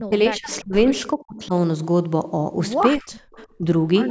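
Speech, with the talker dipping hard at 0.0–0.13, 0.3–0.74, 1.14–1.53 and 3.0–3.4 s, by roughly 30 to 40 dB, plus a mild dip at 3.58–3.65 s. That's likely speech suppressed in double talk, with the echo canceller ducking the near talker while the far side spoke. The call microphone processing tops out around 8 kHz.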